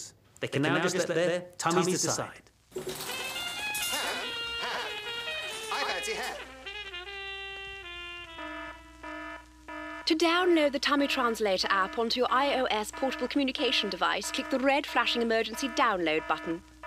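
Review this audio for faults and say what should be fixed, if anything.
A doubled audio track runs from the start of the clip to 5.92 s: a second full-band copy at roughly equal level trails by about a tenth of a second, with no decay, and cuts off abruptly at 5.92 s. It is likely a second capture path or a misaligned edit. Mute the duplicate path or remove the extra copy before mixdown.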